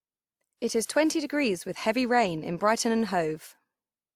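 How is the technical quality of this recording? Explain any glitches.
The speech is degraded by layered compression throughout. From start to finish, two different kinds of codec smearing sit on top of each other, most likely from transcoding between lossy codecs. A WMA pass near 96 kbit/s followed by Opus near 48 kbit/s would fit: the second encoder spends bits on the first one's artefacts and adds its own. What sets this apart from a single low-bitrate encode is hearing two artefact characters at once, not one consistent kind of smearing.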